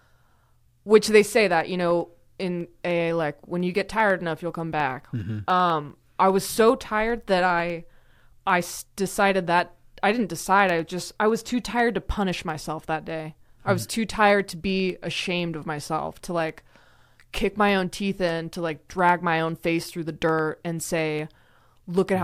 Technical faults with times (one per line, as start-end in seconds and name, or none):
0.11-22.09 periodic USB or driver dropouts